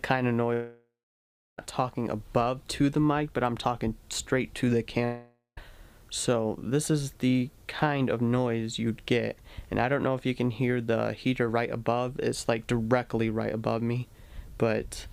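At 0.53 to 1.59 s and 5.05 to 5.58 s, the sound smears into a fading buzz that decays to silence (about 0.67 s, then 0.15 s) before resuming further on, most likely a long network dropout. Unlike a brief packet loss, the fade and gap persist.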